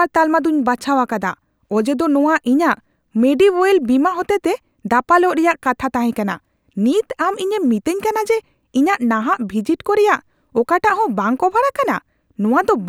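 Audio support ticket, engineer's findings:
No audible faults found in this speech recording.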